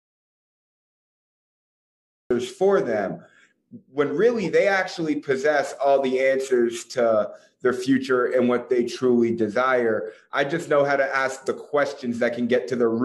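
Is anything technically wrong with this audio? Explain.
Yes. From the very start until 2.30 s the clip is dead silent, with no room tone at all, and sound then enters mid-flow. This is an audio dropout to silence, likely from the input being lost, through a disconnected device, a failed link or a stray mute, while the recorder kept writing silence.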